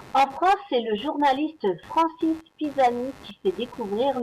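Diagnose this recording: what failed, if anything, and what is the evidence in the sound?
Computer activity noise sits in the analogue wiring for the whole speech clip: a buzzy pulsing at around 100 per second, roughly 25 dB below the speech. Processor or graphics load is modulating the shared audio ground. Unlike steady mains hum, it flickers with computer activity.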